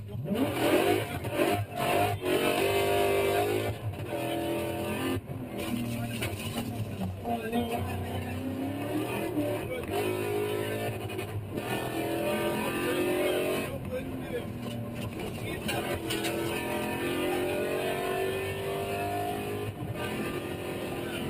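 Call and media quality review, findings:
Sound pumps and thins throughout: attacks pass, sustained parts and tails sink by about 5 dB, then recover. Noise suppressor applied to music or sounds. A speech-tuned suppressor treats steady tones and reverb tails as noise and ducks them.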